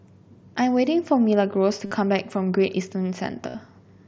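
At 1.86 s and again at 3.49 s the speech hits concealed Bluetooth headset packet loss, each run lasting about 52.5 ms. That fits a string of around seven lost frames between headset and phone. The receiver papered over each gap by repeating the best-matching slice of recent waveform, so you get a short buzzy, steady tone held at full level, then a small warble as real audio resumes. The mSBC wideband link itself is audible as the usual 8 kHz ceiling.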